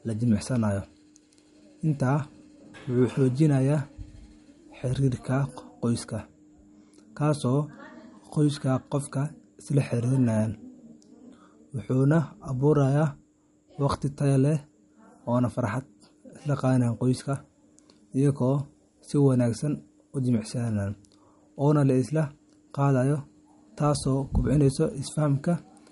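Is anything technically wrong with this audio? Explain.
Yes. Throughout, the speech has plainly audible MP3 compression damage, likely from low-bitrate encoding, which fits roughly 48 kbps. Nothing sits above 11.2 kHz, so a spectrogram shows a flat ceiling there and flickering holes where weak frequency lines switch on and off, heard as watery swirl and metallic chirps on s sounds.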